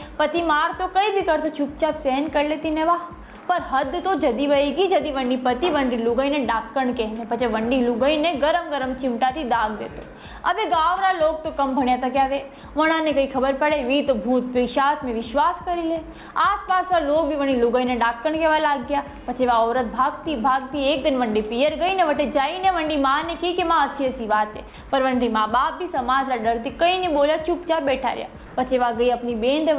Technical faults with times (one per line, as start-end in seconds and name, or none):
21.89 block of digital silence
28.46-28.56 comfort noise in place of the background